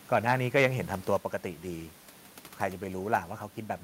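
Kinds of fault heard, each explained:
Microphone overload: From about 0.15 to 0.66 s the loudest peaks push roughly 3 dB past what the converter can represent, so their tops get sliced flat. Only a small fraction of samples, around half a percent, actually hit the ceiling, but that's enough to put a harsh, crackly edge on the strongest syllables. The likely culprit is the mic's input level simply being set too hot for this talker.
Microphone volume stepped down: At about 1.17 s the whole level drops by roughly 5 dB in one go. Both the voice and the room noise underneath it fall together, which tells you it's the input gain moving rather than the talker getting quieter. Coming shortly after that distorted stretch, it's likely the call software reacting to the clipping and pulling the mic's input volume down in a single step.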